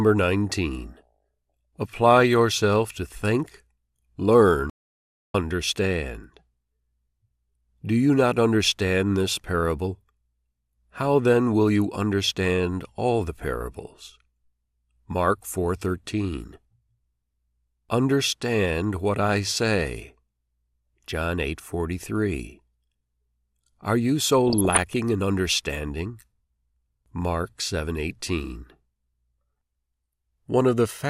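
From 4.70 to 5.34 s the speech cuts off abruptly into silence, with no room tone at all, then resumes mid-flow. This audio dropout to silence removes about 0.65 s of material, likely because the input link failed while the recorder kept writing silence.

At 24.48 s, after "you so", DAB burbling sets in and lasts until 24.80 s, just before "in understanding". Across 15 frames, wrong samples put short blips of noise into single sub-bands over the speech. This points to weak reception letting a bit error rate somewhere under half a percent past the error correction.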